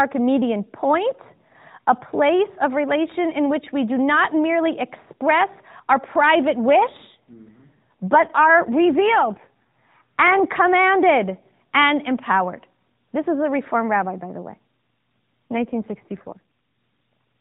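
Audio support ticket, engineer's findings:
AMR rate drop, 6.70–10.41 s ("merely express our private" to "commanded and empowered") and 15.52–16.40 s: speech turns buzzier and more synthetic, consistent with a link-driven switch from the 12.2 kbps mode to a 5.9 kbps mode. On the spectrogram the 4 kHz ceiling is unchanged and the waveform has no gap, but harmonics smear.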